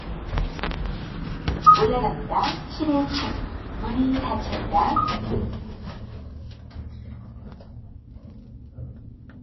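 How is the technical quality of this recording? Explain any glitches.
The recording is dull and band-limited throughout, showing low-bitrate audio saved at a high bitrate. Nothing survives above 5.8 kHz, a flat ceiling on a spectrogram; this is likely a very low-bitrate MP3 re-encoded larger, so the original artefacts remain.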